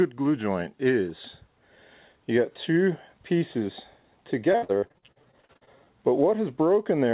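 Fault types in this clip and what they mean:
Repeated packet loss (robotic sound), 4.52 to 5.69 s: over this stretch more than a dozen short dropouts follow one another closely, the longest about 57 ms. Each one is patched by stretching the last bit of received audio forward, and together these patches fill about half a second, close to half the stretch. The result is choppy, robotic sound with pieces missing, heard against the narrowband call audio that stops at 4 kHz.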